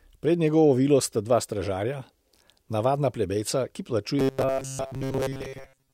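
From 4.19 s to 5.93 s the speech becomes a rigid, metallic buzz pitched at 134 Hz, still loosely tracking the words: robotic sound from repeated short buffers. Fresh audio likely arrived too seldom, so a slice of about 7.5 ms was looped for most of this stretch.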